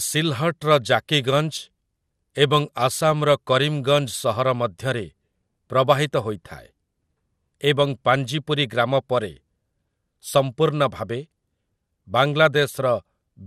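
Throughout the speech the top end sounds dull and shut off, with a gurgling, granular roughness; this is likely MP2 compression, with too few bits forcing upper sub-bands off and leaving the rest coarsely quantised, which fits a rate around 80 kbps. From 5.47 to 5.55 s there is a short patch of DAB burbling. Occasional bit errors slipped past error correction into the MP2 data, and wrong samples put short blips of noise into single sub-bands across two frames.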